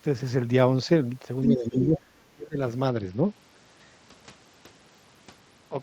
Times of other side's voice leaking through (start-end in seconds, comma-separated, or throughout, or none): 1.43-1.47